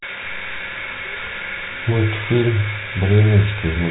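No technical faults can be heard in this speech clip, which carries the ordinary G.711 telephone band with nothing above about 3.9 kHz.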